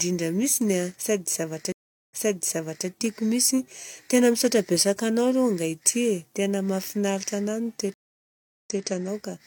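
Stream reconnects at 1.72 to 2.88 s and 7.94 to 8.84 s in this speech clip: the connection drops, the speech goes silent for 367 ms and 717 ms, then a fresh decoder restarts mid-stream from a resent burst, repeating about 0.79 s and 0.19 s of material.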